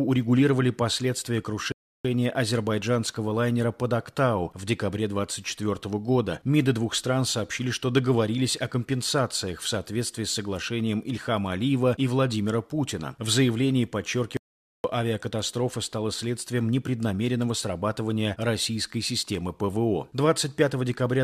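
At 1.72 s the sound halts into silence for about 0.33 s, then picks up exactly where it stopped: a rebuffering stall, with the player waiting for more data. At 14.37 s the audio cuts to dead silence for 0.47 s and returns mid-flow with that stretch missing, an audio dropout to silence, likely from the input being lost while silence was written.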